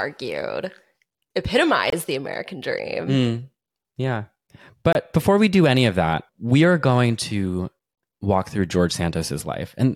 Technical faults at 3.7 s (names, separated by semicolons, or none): none